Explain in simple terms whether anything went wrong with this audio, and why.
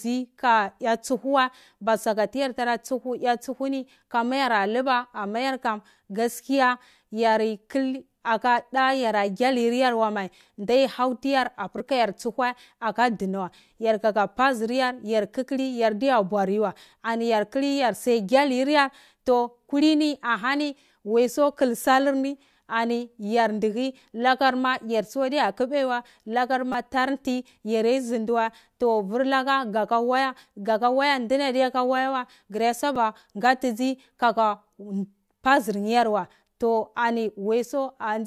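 Something did go wrong, in three short spots, and it's a repeated buffer each time. The playback device didn't get fresh audio in time, so it replayed its last tiny slice, about 5 ms long. At 11.78 to 11.80 s and 26.72 to 26.74 s (just before "tar nti") that slice plays four extra times, a brief buzz replacing about 20 ms of speech. At 32.96 s, right before "ngatizi kaka", it repeats once, a single click.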